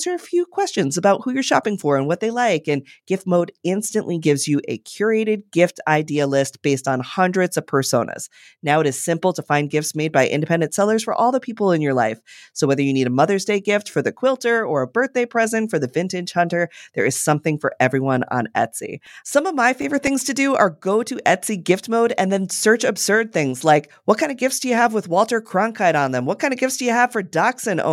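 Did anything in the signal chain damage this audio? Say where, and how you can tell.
Yes. From 18.81 to 20.33 s, after "something for everyone on" and before "do are go to", seven evenly spaced ticks of a few milliseconds cut the speech. These CD scratch ticks arise at disc playback: a blemish defeats error correction each revolution, and the player patches the lost samples.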